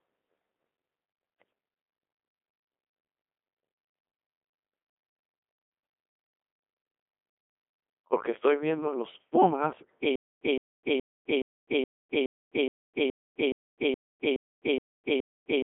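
From the first second the speech comes through the Codec 2 vocoder, heavily damaged. The voice is rebuilt from sine waves driven by pitch, voicing and energy, so it sounds buzzy and robotic rather than just muffled. It sits in a line band of about 250 Hz to 3.5 kHz, with nothing above 3.8 kHz. That combination of synthetic timbre and narrow band fits Codec 2's 2.4 kbit/s mode, and it sets this apart from ordinary low-bitrate waveform coding, which blurs the sound but keeps its natural texture.

At 10.16 s a stutter with silent gaps begins and lasts to the end. A 164 ms burst of sound plays, then about 257 ms of digital silence follows, and the cycle repeats every 421 ms, 13 times in all. The stream likely stalled and replayed its last buffered fragment at each retry, and everything that should have followed is lost. Unlike a simple dropout, the same fragment keeps returning identically. 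Unlike a seamless loop, dead silence separates each repetition.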